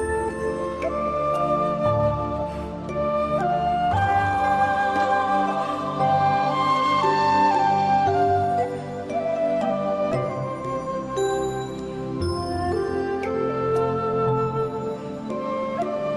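Nothing stood out as a technical fault on listening to this recording.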